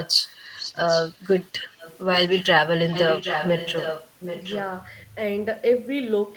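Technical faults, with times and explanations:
0.00–0.38, 0.56–1.97, 2.31–2.43 and 2.91–4.61 s: echo leak. A delayed copy of the speech comes back about 0.77 s late. It ranges from faint to nearly as loud as the speech, and is strongest from 2.91 s. A loudspeaker echo likely slipped past the far end's echo canceller.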